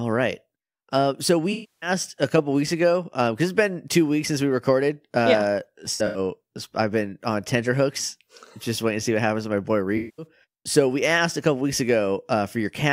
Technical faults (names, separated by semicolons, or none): AAC frame loss with concealment